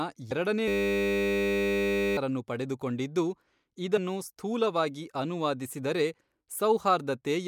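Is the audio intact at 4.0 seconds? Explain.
No. Just before 4.0 seconds, at about 3.96 s, there are compressed frames skipped: whole blocks of the encoded speech never reach the output, so the audio jumps ahead by around 50 ms, which fits about two missing 26.1 ms frames. Because adjacent frames overlap, the join sounds like a short smeared blip, not a sharp click. On a waveform the envelope shifts abruptly without a spike. A spectrogram shows a thin vertical discontinuity where the harmonic traces jump.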